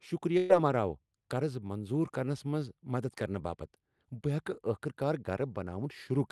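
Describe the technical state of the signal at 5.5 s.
At 5.5 s the speech is intact, with no fault present, only the ordinary coding character of a call codec whose bandwidth stops at about 12 kHz.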